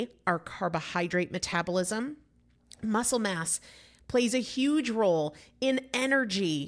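Nothing stood out on listening to this speech recording.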